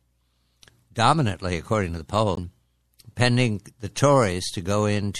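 The audio was likely squeezed through MP3 compression at a low bitrate, around 64 kbps, so the encoder runs short of bits, lops off the treble and lets weak frequency lines flicker in and out between frames. Throughout, this gives a plainly audible watery, swirly texture with metallic edges and smeared attacks. Separately, a stretch of damaged data in the compressed stream makes the decoder misread its frames and lose sync, and from 2.34 to 2.38 s this comes through as a brief chirp or blip before the sound resumes.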